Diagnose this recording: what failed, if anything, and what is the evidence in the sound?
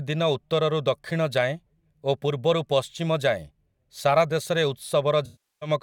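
Codec: AAC frame loss with concealment, 5.25 to 5.69 s. The decoder stretched the last good spectrum over 0.36 s, so the speech decays to a very faint noise floor, then fades back.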